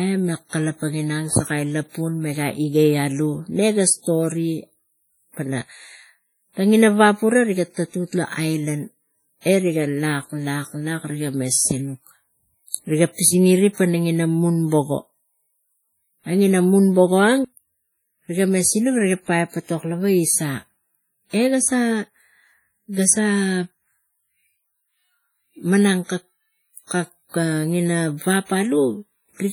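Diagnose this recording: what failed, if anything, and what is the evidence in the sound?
Codec stage: throughout the speech, heavy ringing, washy smear and hiss that breathes with the signal, likely WMA compression near 32 kbps. Spectrograms show blurred blocks with weak components zeroed.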